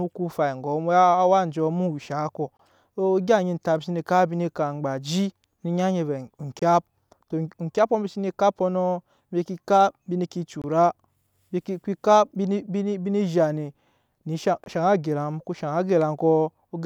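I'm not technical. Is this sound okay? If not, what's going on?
No. The speech has four tiny silent holes, at 2.57, 6.59, 10.62 and 14.64 seconds. The first comes just before "so egya". Each lasts about 23 milliseconds. This is a gap between chunks: the audio was handled in 4-second pieces, and a sliver of silence got inserted at each join. The tell is the clockwork spacing, about every 4 seconds. Unlike a dropout, no speech is missing; it just pauses briefly and carries on.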